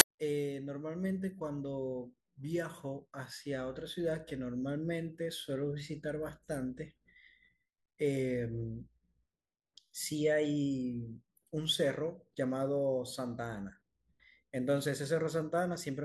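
File tags played as audio at 0.00 s: an embedded cover picture's compressed data is read as samples, giving a brief, hard-edged burst of very loud white noise.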